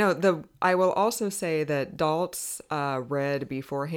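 At 2.46 to 2.51 s, just after "will also say that", chunks are out of order: a roughly 23 ms block plays one chunk late, giving a jumbled moment with three hard steps visible in the waveform.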